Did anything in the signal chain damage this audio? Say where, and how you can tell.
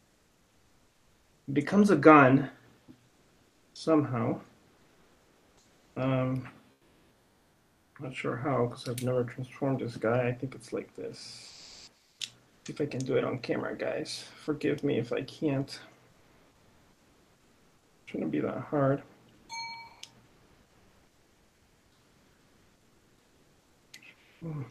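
Yes, in call processing at the sender. From 0.0 to 1.47 s and again from 11.47 to 12.65 s, the real background gives way to comfort noise: steady, featureless hiss, about 3 dB quieter at the start. This is most likely Opus DTX. Unlike a dropout, the gap is filled, not silent.

Sound chopped by the voice detector runs from 3.09 to 7.99 s and from 16.11 to 24.41 s. About 3.1 s and 6.2 s of material are replaced. The likely cause is repeated DTX gating, not packet loss, since the fills are shaped noise rather than concealment.

Sound dropped by the voice detector appears at 12.49–12.65 s, where about 70 ms of sound is lost, and at 14.43–14.47 s. The quiet sound is likely mistaken for background and replaced. Each one is a single gate closing, not the back-and-forth switching heard in the chopped stretches. The Opus path ran at 40 kbps with 12 kHz bandwidth.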